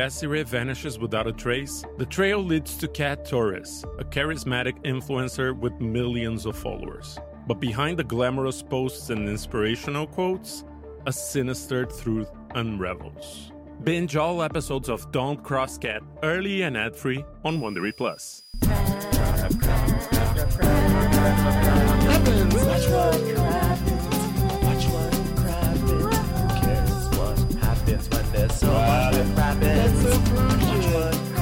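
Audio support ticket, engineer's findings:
Switching supply whistle, 17.48 s to end. Switch-mode PSU in audible burst mode leaking into audio path. High whistle around 5 kHz, wandering 4.86–4.91 kHz, about 25 dB below signal.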